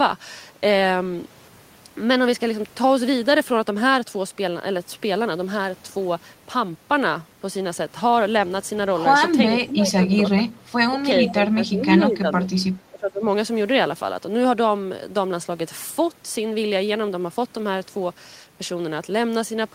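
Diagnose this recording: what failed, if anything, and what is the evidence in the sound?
The call processing stage failed: the speech dips in level repeatedly between 9.66 and 13.25 s, at 9.66–10.57, 10.89–10.99, 11.25–12.54 and 12.74–13.25 s. The drops reach about 15 dB, and about 20 dB in the brief 10.89–10.99 s gap. This pattern is likely speech suppressed in double talk. The echo canceller's suppressor clamps the near talker while the far side is active. Unlike network dropouts, the sound is turned down by the echo canceller rather than lost in transit.

Inside that same stretch, at 11.29–11.33 s, a faint delayed copy of the speech surfaces about 15 dB below the direct sound, lagging it by 443 ms. This is likely an echo leak, where residual loudspeaker pickup slips past an echo canceller that did not remove all of it. A room reflection would arrive within tens of milliseconds and blur the sound continuously. 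This copy arrives much later, as a distinct short scrap, which points to a loudspeaker-to-microphone round trip through the call path.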